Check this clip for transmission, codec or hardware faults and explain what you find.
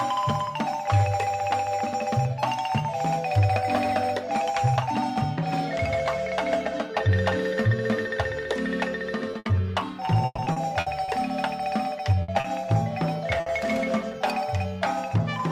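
Three kinds of packet-delivery fault can be heard, all between 9.3 and 13.5 s.

Short stall from a late packet, at 9.31 to 9.36 s and 12.40 to 12.47 s. A packet arrived late and the jitter buffer ran dry. The receiver held the last sound until it came, about 20 ms the first time and 40 ms the second. Nothing is lost. The sound simply hangs briefly, with a faint buzz, and playback shifts later by that amount.

Burst of packet loss, at 9.39 to 9.48 s, 12.22 to 12.31 s and 13.40 to 13.49 s. Each time, a run of packets never arrived in time. The receiver stretched the last sound for about 60 ms and faded it, giving a short held buzz or hiss. The sound then resumes about 60 ms further on, so that stretch is skipped.

Repeated packet loss (robotic sound), from 10.05 to 11.19 s. Six separate gaps fall close together here. The longest is 130 ms. Each is patched by extending the previous sound, about 300 ms of fill in total, while about 180 ms of real audio is missing. 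Concealment covers roughly 28% of the span. The result is choppy, with pieces dropping out.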